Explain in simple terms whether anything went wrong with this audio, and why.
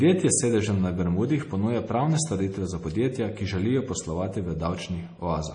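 Throughout the speech, the sound is watery and swirly, and the treble stops dead above 10.4 kHz. The likely cause is heavy MP3 compression: short of data, the encoder cut off the highest frequencies and dropped faint details, which flicker in and out.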